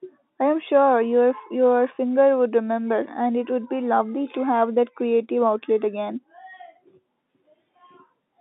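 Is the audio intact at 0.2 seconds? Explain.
Yes, at 0.2 seconds the speech is intact, with no fault present and only the narrow telephone band of the G.711 coding to be heard.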